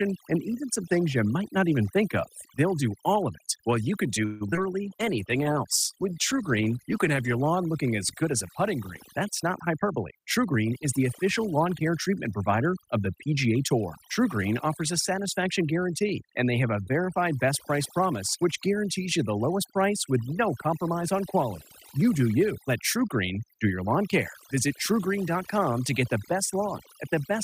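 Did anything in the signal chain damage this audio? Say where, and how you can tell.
Yes. Call processing applied overdone noise removal throughout, switching off frequency bands near its noise estimate, so the background twinkles near silence.

From 4.25 to 4.43 s the last sound is stretched into a fading fill for about 151 ms, likely a call audio freeze from delayed packets. Playback then resumes with nothing lost.

A skip ahead at 4.51 to 4.54 s drops roughly 70 ms of audio, joining the two sides almost directly.

Short concealed packet loss follows at 4.54 and 4.57 s. Each 20 ms hole is patched from the preceding sound, leaving a brief smear.

A call bitrate drop from 32 to 17 kbps between 4.86 and 7.49 s makes the codec work more coarsely, roughening the speech until the rate recovers.

A jitter buffer slow-down from 5.06 to 5.54 s repeats pitch periods to add 44 ms, playing at 92% speed with unchanged pitch and drawn-out sounds.

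A jitter buffer speed-up from 9.67 to 11.57 s cuts roughly 150 ms of pitch periods, running at 108% speed at the same pitch, so the speech sounds hurried.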